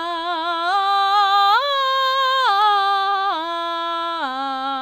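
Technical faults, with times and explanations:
No technical faults detected.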